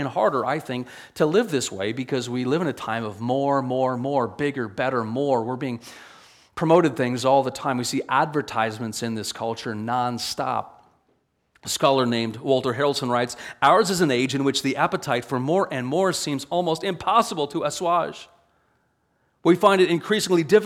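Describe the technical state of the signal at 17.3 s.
At 17.3 s the signal is intact, with no dropout, distortion, glitch or other fault present at that moment.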